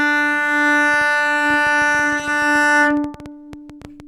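Something in the signal chain, likely interference from nearby equipment or a faulty connection or power supply, begins injecting short pulses at 0.94 s and keeps at it until 4.01 s. The result is a train of clicks, around twenty in all at roughly 7.5 per second, arriving at an uneven pace rather than a steady tick. Each click has much the same shape and peaks at about the level of the sound itself, so the popping sits clearly on top of it and carries through the quieter moments too.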